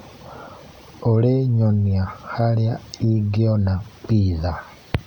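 No technical faults detected.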